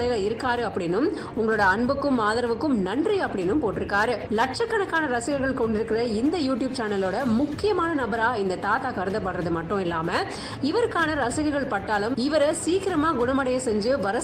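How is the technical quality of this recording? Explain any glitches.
Nothing stood out on listening; no glitches or technical problems could be heard anywhere in the recording.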